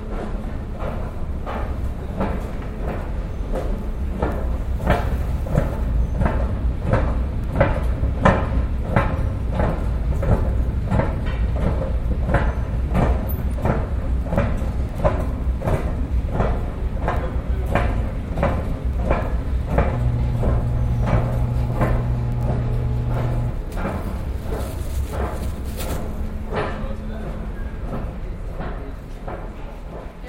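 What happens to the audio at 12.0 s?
Nothing goes wrong at 12.0 s; the audio plays through that moment intact, with no dropout, click, glitch or other audible fault.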